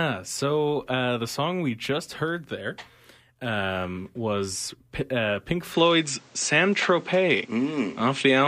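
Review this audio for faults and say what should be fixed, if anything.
From 5.74 s to the end the speech turns duller, with nothing above 8.7 kHz, a level jump of about 5 dB and a new noise floor roughly 30 dB down, with no gap. The likely cause is an input switched to a poorer, narrower-band device. Pin the recording to one fixed input device.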